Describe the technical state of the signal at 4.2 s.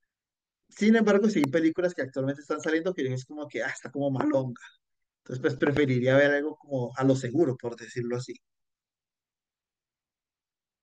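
A single sharp loud pop, around 15 dB above the speech, sits from 4.21 to 4.23 s, likely a sudden voltage pulse, from a switch, plug or static, added to the signal.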